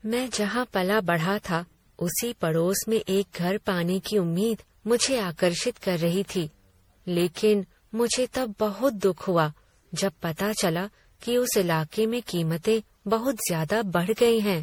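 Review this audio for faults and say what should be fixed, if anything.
Generation loss runs through the whole speech recording: a swirly, hollow, smeared texture with softened consonant attacks, beyond what a single lossy encode would leave. It is likely the result of repeated MP3 passes, around seven, at a rate that sounds consistent with 64 kbit/s. Each re-encode quantises on a shifted frame grid, so errors stack. A spectrogram shows flickering holes and blurred onsets, with nothing above 20.6 kHz. To prevent it, keep a lossless master and encode to MP3 only once, at the end.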